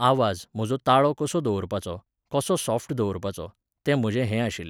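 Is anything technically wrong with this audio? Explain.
No, nothing technically wrong stood out on listening to this speech recording.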